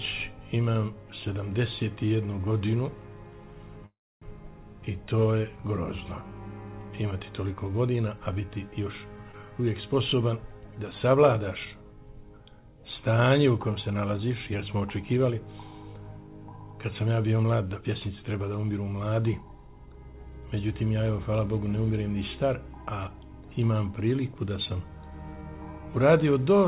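From 3.86 to 4.24 s there is a call audio freeze. Packets were likely held up in transit, so the jitter buffer ran dry and the receiver stretched the last sound into a brief fading buzz, followed by about 290 ms of silence. In all, about 355 ms of filler is inserted. When the packets arrive, the audio picks up exactly where it stopped, so nothing is lost, but the stream now runs later by that same amount.

At 9.32 to 9.35 s comes a skip ahead. Roughly a tenth of a second of audio was dropped while later packets were already queued, either lost in transit or discarded by the jitter buffer. The join is covered by only about 14 ms of fill, so the sound lurches forward with a near-seamless seam and a small chunk visibly absent.

Three jitter buffer speed-ups follow, at 10.99 to 11.75 s, 17.37 to 18.01 s and 20.95 to 22.09 s. Each time the buffer held more audio than its target, so the receiver repeatedly cut out pitch-period-length slivers to shrink the delay. 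The first two trim about 70 ms each and the last about 100 ms. Playback runs at roughly 108 to 109 percent speed with unchanged pitch, giving each stretch a hurried feel.

Throughout, the call path keeps nothing above 4 kHz, which fits 64 kbps G.711 mu-law.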